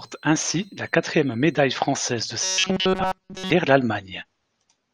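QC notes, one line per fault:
0.00–2.24 s, switching supply whistle: a thin high whistle around 4 kHz, sitting about 35 dB under the speech, from a switching power supply running in an audible burst mode or beating with another one.
2.44–3.51 s, robotic sound from repeated short buffers: speech becomes a rigid metallic buzz at 188 Hz, likely from late audio being filled by looping a short buffer of about 5.3 ms.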